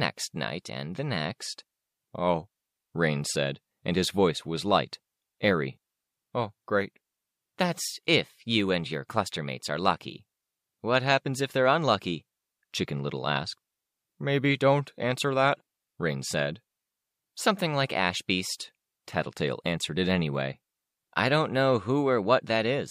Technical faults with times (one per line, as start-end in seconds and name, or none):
none